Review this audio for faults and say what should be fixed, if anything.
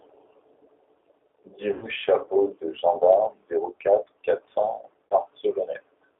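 The whole clip carries G.729 codec damage: speech band-limited to 300 Hz–3.5 kHz, audibly rough and synthetic, consistent with an 8 kbit/s pulse-excited CELP coder.

VoIP packet loss concealed by the speech codec occurs at 1.73–1.87 s (90 ms lost, fitting three packets) and 5.08–5.15 s (30 ms, fitting one). The decoder extrapolates from the last pitch and filter into a fading buzzy tone or coloured noise.

Use a wideband codec and a jitter buffer with forward error correction or redundancy to prevent both.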